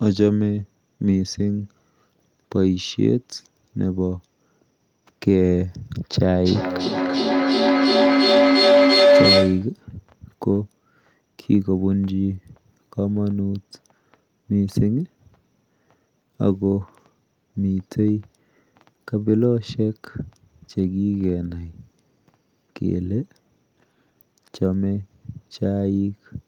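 At 6.45 s a feedback howl kicks in and runs until 9.77 s. It sounds like two devices in the same room on one call, so the mic picks up the other speaker's output and sends it back round, louder each pass. Instead of dying away, the repeats narrow into a tone around 500 Hz that pulses roughly every 300 ms. At its peak it sits about 6 dB above the speech before the loop gets broken.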